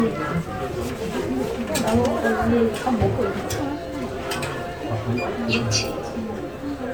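Generation loss runs through the whole recording. The sound is swirly, smeared and hollow, and attacks blur. Nothing sits above about 20.1 kHz. The likely cause is around five rounds of MP3 re-encoding, each pass quantising on a shifted frame grid, which fits 128 kbit/s.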